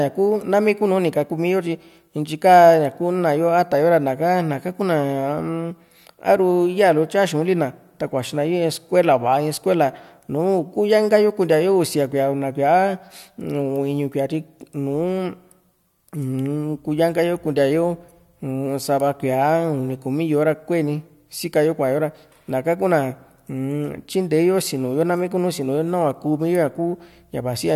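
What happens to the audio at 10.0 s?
Nothing goes wrong at 10.0 s; the speech carries on intact through that moment, with no dropout, click or distortion.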